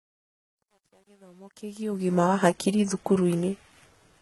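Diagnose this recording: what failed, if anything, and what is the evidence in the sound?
The codec stage shows damage across the whole clip. The speech has gritty, lispy s sounds and nothing above 11.8 kHz, with a synthetic-sounding treble. That points to heavy, likely HE-AAC compression at about 16 kbps, where spectral band replication rebuilds the top band from copied lower bands.

The sample-format or gain stage shows truncation distortion on a fade. The fade-in runs up to 2.16 s, and its quiet start is grainy, worst from 0.0 to 1.7 s. The fade was computed without dither at what sounds like a 10-bit word length, so low-level samples collapse into coarse square steps.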